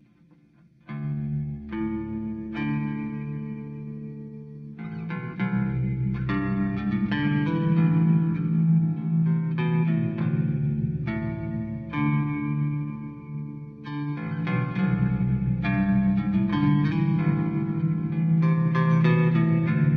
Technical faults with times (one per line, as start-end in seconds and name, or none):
0.00-19.96 channel delay (comb filtering)